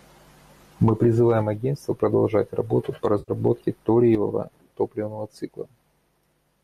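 From 3.19 to 3.32 s the speech dissolves into a smeared, noisy, phasey patch. This is AAC frame loss with concealment: about 90 ms went missing, which fits nine lost frames, and the decoder filled the gap from the last good spectrum, likely in low-delay AAC compression.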